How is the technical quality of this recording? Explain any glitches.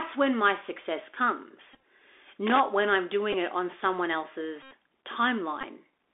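Poor quality: the whole clip is narrowband headset audio with plainly audible codec damage, and it carries several dropout buzzes and one burst of crackle.

The Bluetooth CVSD headset codec runs throughout. CVSD encodes each sample as a single up-or-down bit at 64 kbps, with a step size that adapts to the signal. When the signal changes faster than the step can follow, it distorts. Here the usable band sits at roughly 250 Hz to 3.6 kHz. On a spectrogram, energy stops sharply below 3.6 kHz across the whole clip, with a grainy floor between words. The speech sounds boxed in, s sounds are scratchy, and a granular hiss sits underneath.

Bluetooth headset packet repeated occurs at 1.73–1.78 s, at 3.33–3.34 s between "when I'm" and "it on someone", at 4.63–4.72 s right after "it on someone", and at 5.61–5.65 s. When voice packets are lost, the chip decodes the previous packet again. Repeating every 3.75 ms produces a buzz near 267 Hz. 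The 4.63 s event is the longest, about 82 ms of steady buzz. The first event is split into short bursts of about 10 ms or less, spread over nearly 0.1 s. The 3.33 s event is short, about 11 ms of buzz. The waveform shows identical short cycles repeating, and the spectrogram shows a comb of harmonics spaced 267 Hz apart.

Loose connector crackle occurs at 2.47–2.60 s, just before "when I'm". A worn or dirty contact makes and breaks rapidly, chopping the signal. It sounds like an irregular scratchy crackle lasting about 0.13 s. On the waveform it appears as jagged spikes and gaps. On the spectrogram it shows as broadband vertical streaks.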